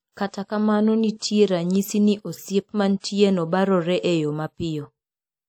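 A short hiss smears in just ahead of sharp speech onsets at 0.31 to 0.33 s, 1.17 to 1.22 s before "ranyisi ni osiep", and 2.99 to 3.04 s before "barore e yo". This is pre-echo: the codec spread coding noise across each block, filling the 29 to 53 ms of quiet before each attack.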